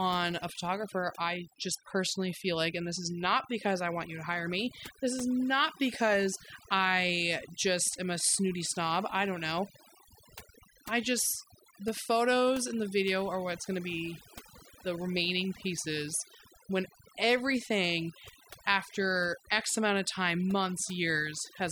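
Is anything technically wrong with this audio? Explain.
Yes. Overdone noise removal runs throughout: bands near the noise estimate are cut hard, taking quiet parts of the voice with them and leaving a lowered background that breaks up into twinkling specks.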